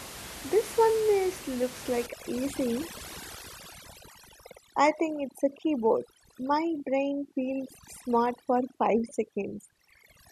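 Overdone noise removal starts at 2.06 s, just after "this one is looks", and runs to the end. Bands near the noise estimate are cut hard, taking quiet speech detail too. Room noise, about 14 dB down, drops and breaks up into twinkling specks.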